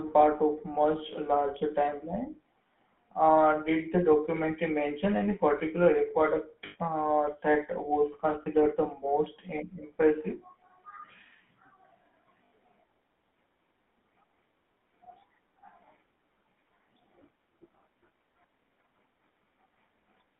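Speech carried through the GSM full-rate codec: the band stops near 3.5 kHz and the voice has the buzzy, gravelly roughness of regular-pulse excitation, which fits the 13 kbps full-rate codec. Narrowband codecs that band-limit the voice just as hard, such as G.711, sound smooth rather than gritty. Lost GSM frames then hold the sound as a brief metallic ring: 80 ms at 6.66 s just before "uh that was", 40 ms at 8.42 s between "uh that was" and "the most", and 80 ms at 12.44 s. A dropout with no concealment would leave a silent gap or a click, not this ring.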